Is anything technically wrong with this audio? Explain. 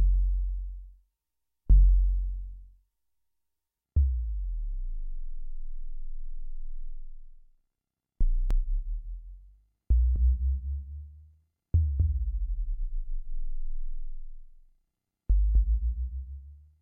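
Yes. From 8.51 s to the end there is a doubled audio track: a full-band copy about 5 dB quieter trails roughly 300 ms behind, starting abruptly, likely from a second slower capture path or a misaligned edit.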